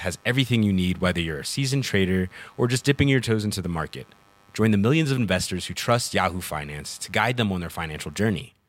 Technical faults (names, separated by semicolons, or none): computer activity noise